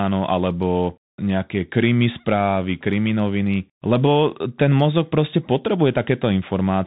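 From start to end, the speech carries Bluetooth CVSD headset codec damage. Nothing passes above 4 kHz. S sounds turn scratchy over granular hiss, which fits a 64 kbit/s one-bit delta stream.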